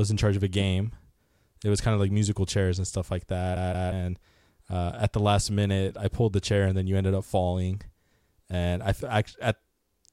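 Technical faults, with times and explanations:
3.56 to 3.92 s, CD stuck on one turn: a brief, even stutter as one fragment of speech about 179 ms long plays twice in a row, with a tiny mute at each jump. A scratch keeps knocking the laser back one track at the same point on the disc's rotation.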